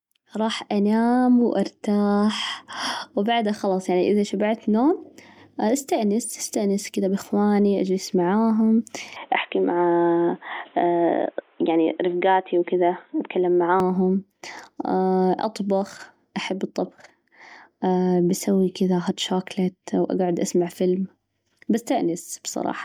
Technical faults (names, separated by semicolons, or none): generation loss; input switched to a poorer device